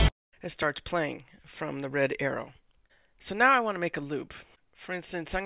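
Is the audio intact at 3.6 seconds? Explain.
Yes, the audio at 3.6 seconds is intact, with no dropout, click, distortion or other fault at that moment.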